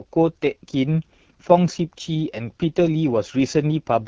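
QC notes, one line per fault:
Throughout: AMR wideband (HD Voice) codec damage, plainly audible. Speech sounds rough and raspy, consistent with a low 8.85 kbit/s rate starving the vocal tract model.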